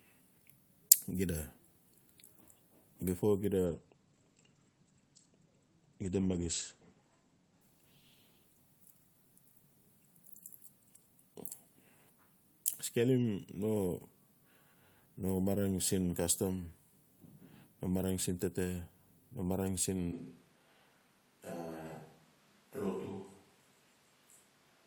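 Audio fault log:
3.67–11.19 s, call bitrate drop: The bandwidth estimate collapsed and the encoder was starved of bits, which fits a fall from 64 kbps to about 13 kbps. The speech turns coarse and watery, the top end is cut from 20 kHz to 8 kHz, and it sounds dullest for roughly 3.7 s.
20.12 s to end, switch to a distant microphone: The close microphone's feed was likely lost, leaving a far-off pickup. From that point the speech turns abruptly roomy and hollow with thinner bass, drops roughly 10 dB, and background noise rises to around 25 dB below the speech.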